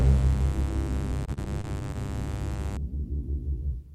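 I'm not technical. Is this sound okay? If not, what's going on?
No. From the start until about 2.77 s there is mains buzz. Electrical interference from the 50 Hz power supply leaks in, making a steady, raspy hum that is fairly loud.

Between about 1.26 and 1.96 s there is repeated packet loss, which gives a robotic sound. Small pieces of audio went missing, the longest about 34 ms, and each gap was patched by stretching the previous sound. This makes the audio choppy and robotic.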